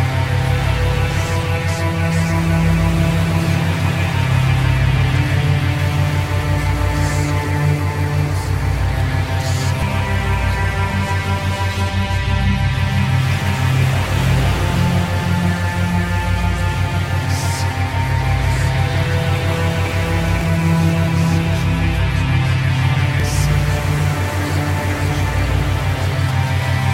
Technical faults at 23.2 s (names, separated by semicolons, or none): damaged data in a compressed stream